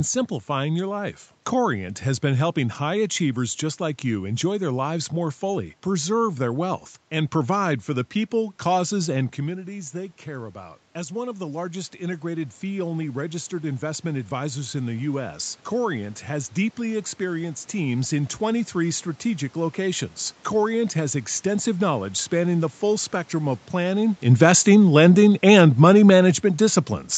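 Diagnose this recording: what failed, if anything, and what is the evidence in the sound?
Automatic gain rising, in the call processing stage. Around 9 s the speech drops as the talker moves back. From 9.43 to 22.21 s the gain climbs about 11 dB. Speech and room noise swell together, slowly, restoring the level.

Automatic gain falling, also in call processing. Near 24 s the talker comes closer and the speech turns louder. From 24.24 to 26.89 s the gain eases down by about 5 dB. The speech and its background room noise sink together.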